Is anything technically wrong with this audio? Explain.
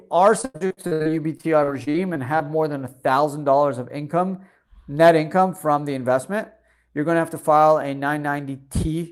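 Yes. From 0.41 to 2.45 s there is repeated packet loss, giving robotic speech. Seventeen gaps, the longest 92 ms, were patched by stretching earlier sound. The result is choppy, with pieces missing.

From 7.05 to 7.57 s a jitter buffer speed-up occurs. The receiver trimmed about 70 ms of pitch periods to cut delay. Speech runs at 110% speed and sounds hurried, with pitch unchanged.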